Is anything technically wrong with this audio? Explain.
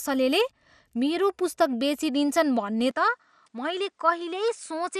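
Yes, two things. Throughout, there's a dull, gurgly graininess with nothing above 14.4 kHz, likely MP2 compression, starved upper sub-bands switching off, which fits roughly 80 kbps. From 2.91 s to the end the speech suddenly narrows to nothing above 10 kHz, drops about 5 dB and picks up a faint new hiss, with no gap at the change, likely the input switched to a poorer device.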